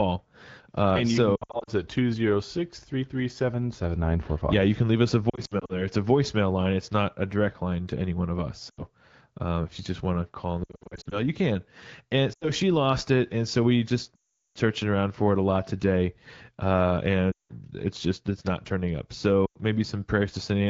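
Lost AMR speech frames break up the speech at 1.35, 5.30, 8.70, 10.63, 12.33, 14.16, 17.31 and 19.45 s, after "you so", "can leave us a" and "it's not turning up". Radio errors corrupt the frames, and the decoder stretches the last good sound with falling gain. This gives brief warbles and dips, and at 14.16 s a 0.4 s stretch that fades toward silence.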